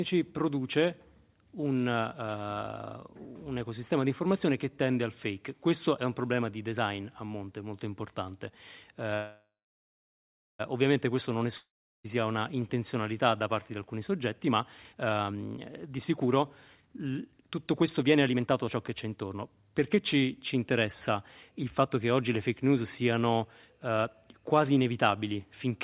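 Speech carried over a call path whose band stops at 4 kHz, consistent with a G.711 A-law codec at 64 kbps. From 9.14 to 10.61 s there is a call audio freeze: the last sound is stretched into a fading buzz or hiss, then about 1.08 s of silence, and speech resumes where it stopped. That 1.45 s gap, with nothing lost, points to delayed packets emptying the jitter buffer. From 11.57 to 12.08 s a long network dropout, likely from lost packets, produces a fading fill and about 0.37 s of silence, and speech returns with roughly 0.48 s missing. From 14.27 to 21.97 s a jitter buffer speed-up makes the speech run at 119% speed at unchanged pitch and sound hurried, as the receiver trims short pitch-period segments, around one and a half seconds in total, to bring the delay back down.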